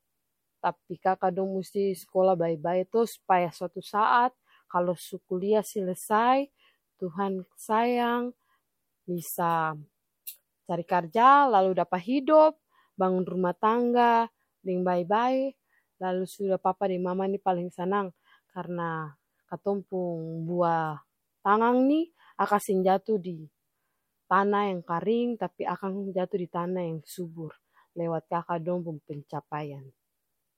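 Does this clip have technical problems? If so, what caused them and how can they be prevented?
No, the signal shows no technical problems that can be heard, so there is nothing to trace to a cause or to prevent.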